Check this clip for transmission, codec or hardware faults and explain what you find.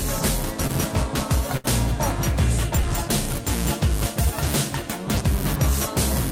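Two packet-loss faults show up in this music, both in the first two seconds.

At 0.67 to 0.71 s there's a short concealed packet loss. About 20 ms never arrived, and the receiver patched roughly 17 ms by extending the last sound, so you hear a quick smear.

At 1.57 to 1.66 s comes a burst of packet loss. About 60 ms went missing, and the receiver held and faded the previous sound for around 67 ms, giving a brief sustained buzz or hiss before the music picks up further along.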